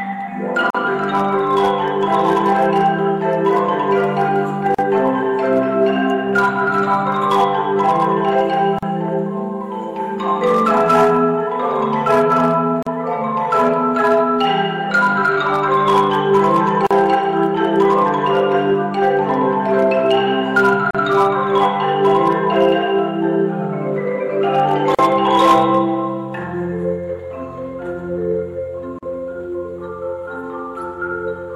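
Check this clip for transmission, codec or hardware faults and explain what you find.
There is one fault, repeating through the clip. A gap at a join of encoded pieces occurs at 0.70, 4.75, 8.79, 12.83, 16.87, 20.91, 24.95 and 28.99 s, one every 4.0 s. The sound was encoded in separate 4-second pieces and joined without trimming, so each piece's encoder start-up delay and padded final frame remain. Each join is a dropout of about 40 ms (43 ms for the first) with smeared edges. The sound then resumes where it left off.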